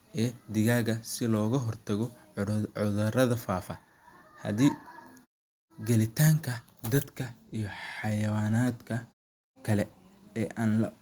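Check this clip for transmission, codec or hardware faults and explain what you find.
No transmission, codec or hardware faults are audible in this speech clip.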